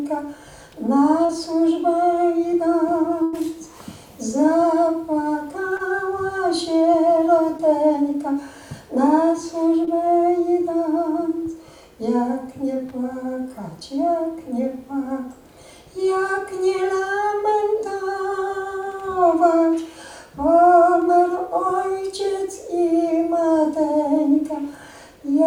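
At 1.25 to 1.31 s there is a brief smear, as though the sound stretches for an instant before settling back. This is short concealed packet loss: about 40 ms of audio arrived too late, so the receiver extended the preceding sound and blended back into the real signal.

From 3.23 to 3.35 s the sound turns into a held, thinning continuation and then jumps ahead, with about 100 ms missing. This is a burst of packet loss. Several consecutive packets never arrived in time, so the receiver kept extending the last sound while fading it down, then resumed further on without the lost stretch.

The same short concealed packet loss returns at 5.77 to 5.81 s, 7.57 to 7.61 s and 9.85 to 9.89 s. Each is a quicker wobble where about 20 ms of audio was lost and filled in.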